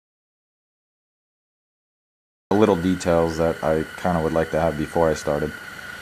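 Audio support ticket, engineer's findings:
Audio dropout to silence, 0.00 to 2.51 s, already under way at clip start: dead silence, no room tone, sound enters abruptly mid-flow at 2.51 s. Likely lost input upstream (disconnected device, failed link or stray mute), recorder writing silence meanwhile. Content in gap unrecoverable.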